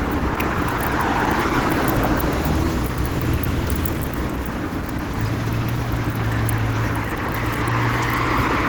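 From the very start and all the way through, the audio carries plainly audible damage, likely from Opus compression. Tones come out rough and grainy rather than swirly, as though thin bands of noise were standing in for detail that didn't fit. The top end still reaches about 20.2 kHz, yet it has a hoarse, muffled quality that points to the encoder's hybrid mode running at a low rate, somewhere around 16 kbps.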